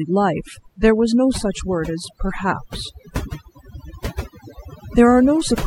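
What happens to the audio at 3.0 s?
At 3.0 s the speech shows overdone noise removal, present throughout: over-strong noise reduction gates bands near the noise estimate, leaving a lowered background broken into twinkling specks, and a spectrogram with scattered isolated bins and blacked-out gaps.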